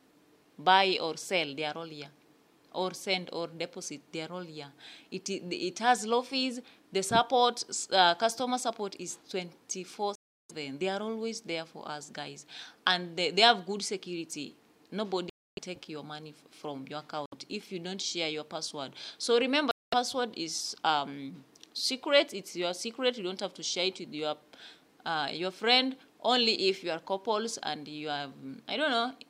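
Packets likely failed to reach the headphones in time, a Bluetooth dropout: the sound cuts abruptly to silence at 10.15 s for 0.34 s, 15.30 s for 0.28 s, 17.26 s for 0.06 s and 19.71 s for 0.21 s, then resumes further on, as if it had kept playing.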